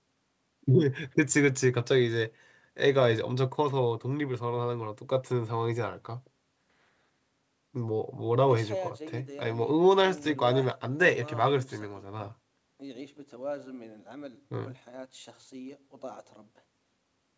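No technical faults can be heard anywhere in the speech. The sound passes through call microphone processing and a WebRTC call path using the G.722 codec at 64 kbps, so nothing is present above 8 kHz.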